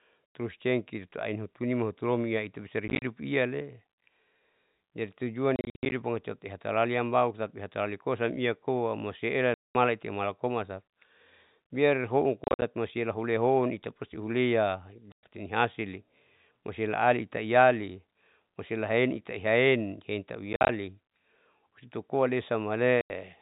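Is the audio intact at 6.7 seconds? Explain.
Yes, the speech at 6.7 seconds is intact, with no dropout, click or other fault at that moment, only the narrow telephone-band sound of G.711 coding.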